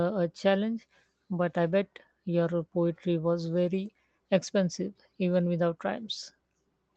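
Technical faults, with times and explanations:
No technical faults are present in this speech clip.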